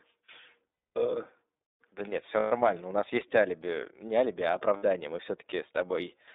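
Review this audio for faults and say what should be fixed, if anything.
The whole clip is coded with the iLBC codec. Speech is confined to roughly 250 Hz to 3.7 kHz and sounds plainly rough and synthetic, which fits iLBC's 30 ms, 13.33 kbps mode. Prevent it by using a wideband codec such as Opus.

There are lost iLBC frames at 0.73 to 0.97 s (240 ms), 2.40 to 2.52 s (120 ms) and 4.77 to 4.83 s (60 ms). In each gap the decoder repeats the last pitch cycle with noise, producing a held, buzzy vowel. The lengths point to runs of eight, four and two 30 ms frames. Prevent it by adding jitter buffering, forward error correction or redundancy on the lossy link.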